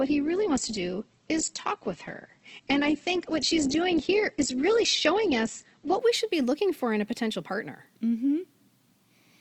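Adaptive stream starting at a low bitrate, 0.0 to 6.0 s: the speech lacks anything above 8.2 kHz and carries stronger codec artefacts, which fits a low-rate Opus encoding. The player then switches up to a better version, and quality jumps without a gap just before "we should be looking".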